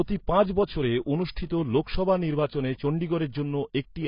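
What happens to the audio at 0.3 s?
AAC compression runs throughout, including 0.3 s: low-bitrate coding, likely AAC-LC near 16 kbps, cuts everything above 5.2 kHz, leaving the speech dull and smeared.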